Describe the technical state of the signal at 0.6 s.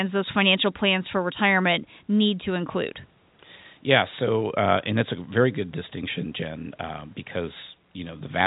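At 0.6 s the audio is intact, with the speech carried cleanly through G.711 telephone coding that leaves nothing above about 3.8 kHz and a faint room noise sitting about 41 dB below it.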